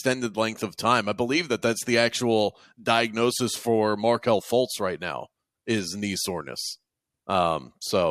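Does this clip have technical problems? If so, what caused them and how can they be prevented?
No, there are no technical problems in this recording.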